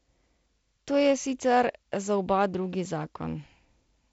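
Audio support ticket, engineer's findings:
No faults found: the speech sits behind working G.722 wideband telephone coding, with nothing above 7.7 kHz, a faint upper-band hiss and slightly grainier low band that fits the 48 kbit/s mode.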